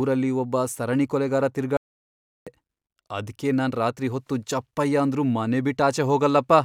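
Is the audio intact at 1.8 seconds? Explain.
No. The input signal was likely lost while the recorder kept writing silence: an audio dropout to silence from 1.77 to 2.47 s. Just after "ಒಬ್ಬ ಸರಣಿ ಕೊಲೆಗಾರ" the speech cuts off into complete silence with no room tone, and about 0.7 s of it is gone.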